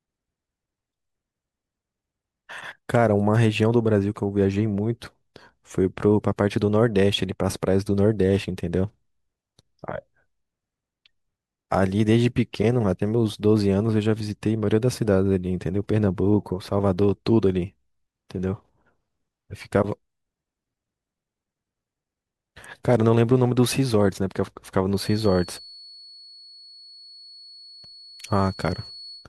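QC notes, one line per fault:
24.90 to 29.29 s, feedback whistle: a thin, steady tone at 4.4 kHz sits roughly 25 dB under the speech and swells and fades slowly in level, running to the end. Likely a speaker-to-mic loop hovering right at the edge of feedback without taking off.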